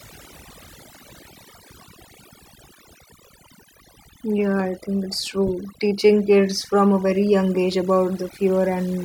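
Overdone noise removal runs throughout the speech. A noise reducer set too strong pulls individual frequency bands down or out whenever they sit near its noise estimate, taking quieter parts of the voice along, so pauses fall to near silence with twinkling specks.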